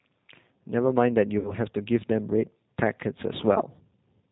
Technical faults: G.729 codec; VoIP packet loss concealed by the speech codec

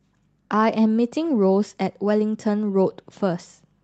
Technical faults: none

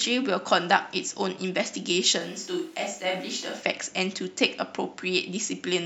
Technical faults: switch to a distant microphone

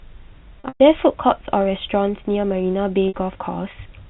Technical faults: packet loss with pitch repetition

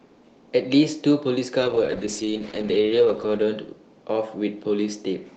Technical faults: call bitrate drop

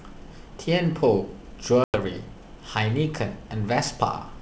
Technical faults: packet loss on an ADPCM call

